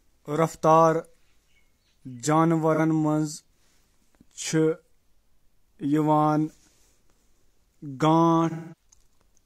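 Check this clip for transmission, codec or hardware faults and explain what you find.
AAC frame loss with concealment occurs twice. The decoder lost compressed frames and patched the gaps by reusing the last good spectrum. At 2.74 to 2.80 s, a gap of about 43 ms (consistent with one lost frame) leaves a brief smeared, phasey patch. At 8.50 to 8.86 s, a longer gap of about 213 ms (consistent with roughly five frames) decays toward silence before the sound fades back in.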